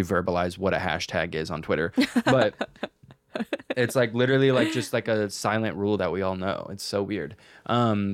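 No technical faults can be heard in this speech clip.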